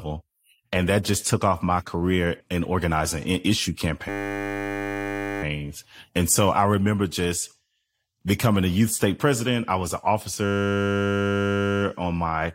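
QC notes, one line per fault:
4.09–5.43 s and 10.45–11.82 s, system hang loop: speech freezes into a steady 100 Hz buzz. The playback stalls while the sound hardware keeps replaying one 10 ms slice of its ring buffer, over a hundred times in each stretch. Almost no speech seems lost afterwards. On a waveform both stretches show one identical 10 ms cycle tiled at a flat level. A spectrogram shows evenly spaced horizontal lines at multiples of 100 Hz.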